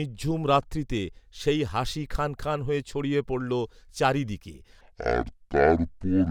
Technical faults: section at the wrong speed

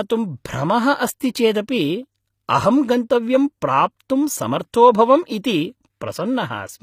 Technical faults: HE-AAC compression; pre-echo

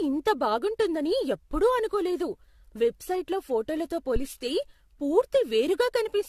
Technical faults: generation loss; phantom power thump

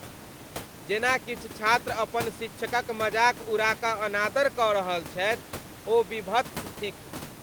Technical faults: none

